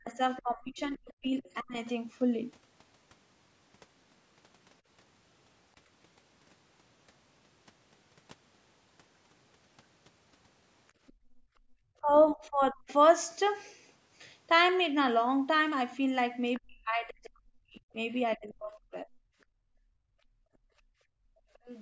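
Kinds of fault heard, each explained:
Speech suppressed in double talk: The talker's speech dips sharply, roughly 40 dB at its deepest, over about a second within the first 1.77 s, about 0.7 s between 12.0 and 12.9 s, and about 2 s between 16.59 and 19.25 s. Each dip overlaps a second voice. The likely cause is an echo canceller that could not tell the talker from the loudspeaker echo and pulled both down together.
Other side's voice leaking through: A second, fainter voice sits well under the talker, roughly 20 to 25 dB down. It appears from 0.37 to 1.89 s, from 11.07 to 12.31 s, briefly at 16.54 s, and again from 21.53 s to the end. It is likely loudspeaker playback of the far end reaching the microphone that the echo canceller did not fully remove, so scraps of it survive into the sent audio.
Background gated by the echo canceller: The room tone drops away, by about 23 dB for roughly 0.7 s between 10.91 and 11.72 s, and by about 26 dB for about 2 s from 19.53 to 21.53 s, then returns. 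The canceller clamps the microphone hard while the loudspeaker plays and releases it afterwards, so the background, not just the echo, is pulled down too.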